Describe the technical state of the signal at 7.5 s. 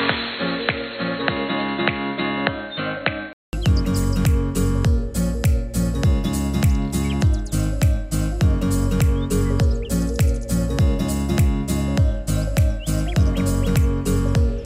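No fault is audible at 7.5 s, and the signal runs intact through that moment.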